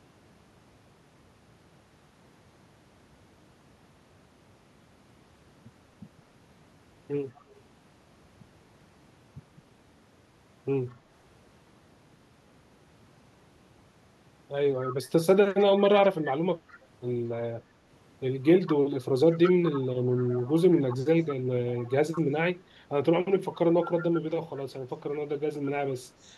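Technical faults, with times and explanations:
7.35–7.53 s, 10.9–10.95 s, 14.84–15.65 s, 16.68–16.78 s, 18.44–21.36 s, 21.67–22.22 s, 26.21–26.3 s: echo leak. A copy of the speech returns 202 ms late, faint in the short scraps and strong at 14.84–15.65 s and 18.44–21.36 s. It is likely a far-end echo canceller failing, and its fixed, distinct delay separates it from room reverberation.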